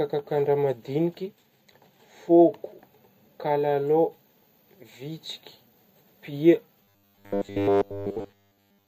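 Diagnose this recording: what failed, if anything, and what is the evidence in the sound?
The speech holds up until about 6.84 s, then from there to the end at 8.88 s it turns into a rigid, metallic robotic sound from repeated short buffers. There's a fixed 100 Hz buzz under everything, and essentially the whole stretch is repeats, loosely tracking the speech. The likely culprit is the driver or buffer stage starving: fresh audio arrives too seldom, so it keeps replaying the last chunk, about 10 ms long, while the real signal gets skipped.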